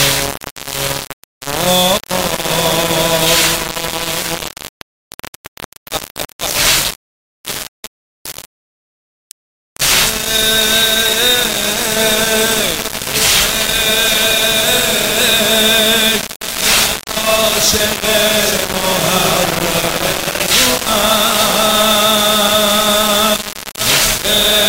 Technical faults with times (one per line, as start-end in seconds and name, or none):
0.00-24.68 low bit depth without dither